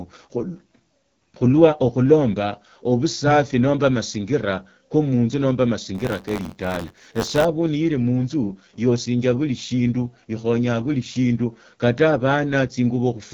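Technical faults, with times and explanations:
Throughout, AMR wideband (HD Voice) codec: the speech is rough and raspy, with nothing above about 7 kHz. The band is rebuilt from a pulse-driven vocal tract model with noise-filled top, and damage this plain points to one of its lowest rates, around 8.85 kbit/s.
5.94 to 7.45 s, buffer tearing: a steady robotic buzz near 93.8 Hz rides on the speech, which fits a 512-sample buffer. Writer and reader cross inside each period, so a small slice of every buffer replays audio about 20 ms old between hard joins.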